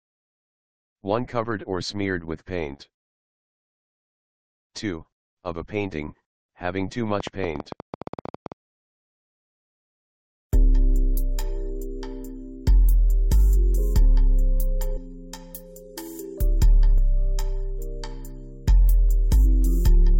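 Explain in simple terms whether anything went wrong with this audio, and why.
Two problems can be heard. From 7.20 to 8.53 seconds there is a train of clicks: about fifteen sharp ticks, roughly 12 per second, at an uneven pace. Each click is a tiny jolt pushed into the signal, likely from interference by nearby equipment.

Later there is damaged data in a compressed stream, heard as brief blips from 14.96 to 14.98 seconds and again at 16.97 seconds. A few bytes of the file were corrupted. The player lost its place.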